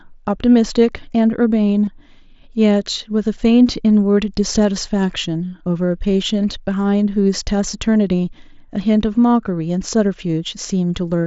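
At 1.86 s and again from 3.67 to 3.69 s, the speech shows concealed Bluetooth headset packet loss. Roughly 22.5 ms of audio went missing each time, which suggests three lost headset frames, and the receiver filled each gap by repeating a closely matching stretch of the preceding waveform. Each gap is a run of lost frames, so each comes through as a brief buzzy, held tone and a slight warble as the real signal resumes, all over the mSBC wideband headset path.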